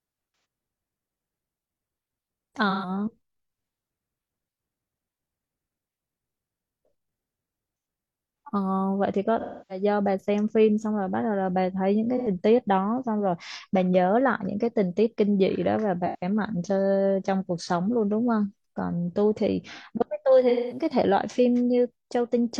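Speech with AAC frame loss with concealment at 0.32, 2.70, 9.40, 12.17, 16.05 and 20.49 s. Each gap is concealed as the decoder reuses the last good spectrum. The longest, around 0.3 s at 9.40 s, fits about seven lost frames.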